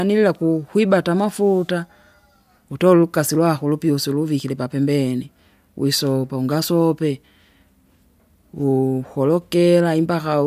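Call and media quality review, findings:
No faults found in the speech recording. No action required.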